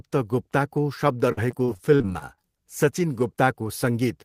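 From 1.32 to 2.43 s the stream suffers repeated packet loss (robotic sound): audio arrives late or not at all, over and over, and the receiver covers each hole by stretching the last good sound forward. About a fifth of that stretch is patched this way, spread over ten separate dropouts, with the longest hole about 47 ms. The speech turns choppy, with small pieces missing throughout.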